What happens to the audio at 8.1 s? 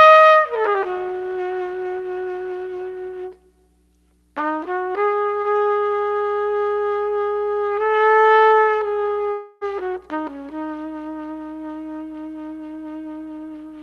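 Nothing goes wrong at 8.1 s: the sound carries straight through that moment without dropouts, glitches or distortion, with only the band limit and light coding texture of the call codec it passed through.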